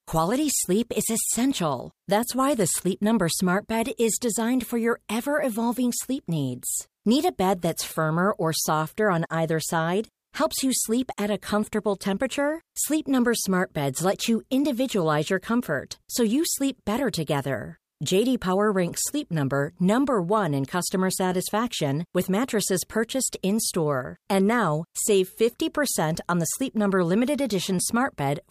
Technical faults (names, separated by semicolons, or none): none